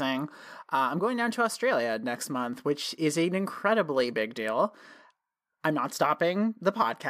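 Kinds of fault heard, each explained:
No faults can be heard.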